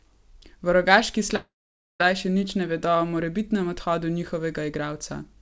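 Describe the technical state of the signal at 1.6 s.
At 1.6 s the speech is inside a long network dropout running from about 1.36 to 2.02 s, likely caused by packets that never arrived. The receiver stretched the last sound into a buzzy tail that fades out, leaving about half a second of near silence before the speech resumes at "še nič ne vedo". Roughly 0.64 s of speech is lost. A short packet-loss glitch would be a brief blip and a clean edit would have no tail, but here a fading synthetic tail is followed by a long empty stretch.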